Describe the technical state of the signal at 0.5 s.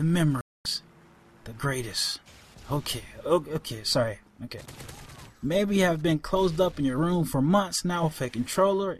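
At 0.5 s the signal is inside a digital broadcast dropout running from 0.41 to 0.66 s. The receiver stopped getting valid frames and muted, leaving about 240 ms of silence, consistent with roughly ten lost frames. Unlike a concealed packet gap, nothing is filled in; the programme resumes with that stretch simply missing.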